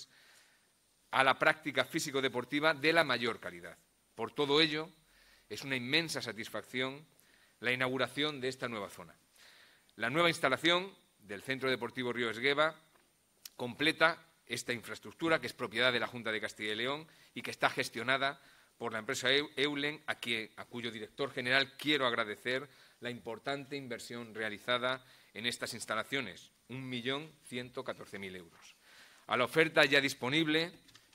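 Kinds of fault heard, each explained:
No kinds of fault are heard in this clip.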